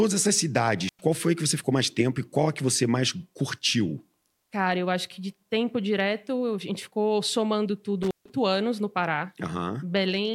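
The speech drops out with a crackle at each edge, from 0.88 to 1.00 s just before "qual foi que você" and from 8.03 to 8.30 s between "a gente ficou somando" and "anos no", leaving faint hiss. This intermittent contact is a loose cable or plug briefly opening, for about 100 ms and 148 ms.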